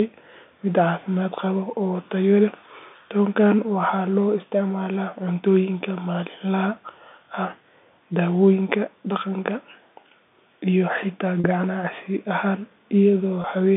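Packet loss with pitch repetition at 11.41 to 11.44 s and 13.42 to 13.44 s: about 40 ms and 20 ms of speech went missing, which fits two packets and then one. The receiver filled each gap by repeating the last pitch period, so the speech briefly holds as a buzzy sustained tone over the narrow telephone band.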